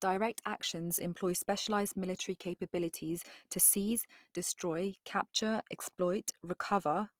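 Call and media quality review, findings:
Throughout: speech grainy, rough, tonal parts noisy, little swirl, full band to 20.4 kHz. Likely Opus compression, CELT mode noise-filling starved bands; fits a 24 kbps stream.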